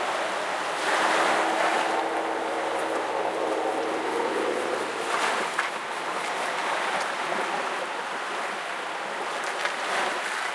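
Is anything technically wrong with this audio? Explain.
No, nothing is technically wrong with this audio.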